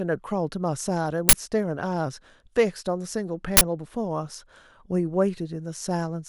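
Twice in this speech clip, at 1.29 to 1.33 s and again at 3.57 to 3.61 s, the playback path sent out an uninitialised buffer: a block was played before any audio had been written into it, so whatever stale data sat in that memory was treated as samples. Each time this produces a 40 ms burst of harsh digital noise that cuts in and stops abruptly.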